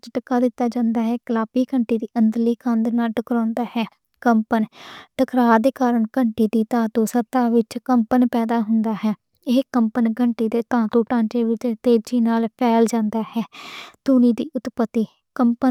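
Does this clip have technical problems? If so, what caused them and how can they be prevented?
No, there are no technical problems to report in this clip. Nothing in the recording calls for a cause to be traced or a preventive step to be taken.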